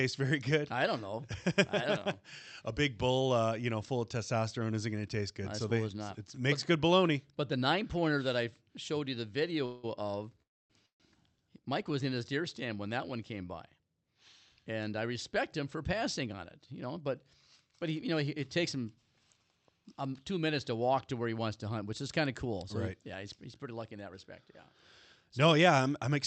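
Speech carried over a call path, with its energy stopping at about 8 kHz as the Opus coding band limit shows on a spectrogram, is interrupted by three call audio freezes and two stretches of jitter buffer speed-up. The freezes most likely come from delayed packets draining the jitter buffer. Right after "I showed you the", the sound at 9.65 to 9.85 s is stretched into a fading buzz for about 180 ms. At 10.42 to 10.72 s and 10.86 to 11.02 s, a very brief continuation gives way to silence of about 260 ms and 130 ms. On a spectrogram these appear as smeared horizontal streaks followed by blank columns, and the waveform goes flat. The speech then resumes where it stopped, so the freezes add delay without losing any audio. Later, the receiver trims pitch-period-sized pieces to catch up. From 15.81 to 16.87 s, between "I respect him for" and "but but he you", speech runs about 6% fast, with roughly 70 ms removed. 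From 22.45 to 25.66 s, after "which is kind of", it runs about 4% fast, with around 150 ms removed. Pitch is unchanged, so harmonics stay at the same heights while syllables are compressed in time, and the waveform shows tiny splice points.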